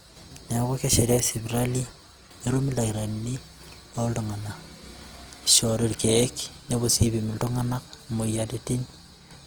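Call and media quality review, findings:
Opus compression, throughout the speech: plainly audible grainy, rough texture. Likely an Opus encoder in CELT music mode near 24 kbps, filling starved bands with folded or noise content. Spectrogram: fullband to 20.2 kHz, upper bands speckled and noisy, few holes.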